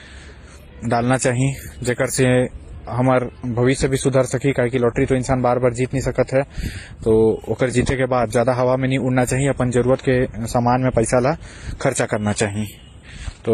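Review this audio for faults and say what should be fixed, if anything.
Throughout the speech, several layers of compression damage are heard together over a band-limited tone, with nothing above 14.8 kHz. This is likely transcoding between lossy codecs. The sound points to a low-rate MP3 re-encoded through WMA and then HE-AAC, with each stage spending bits on the previous artefacts. To prevent it, encode once, directly from the original uncompressed source.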